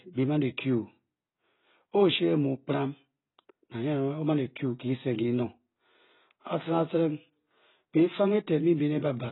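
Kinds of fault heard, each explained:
AAC compression: The speech was likely encoded with AAC-LC at a very low bitrate, which the sound suggests is around 16 kbps. With so few bits per frame, the encoder cut off everything above 4 kHz and quantised the remaining bands coarsely. Throughout the clip the speech sounds heavily muffled and dull, sibilants lose their crispness, and what detail remains is smeared, with a fizzy, unsteady texture on sustained sounds.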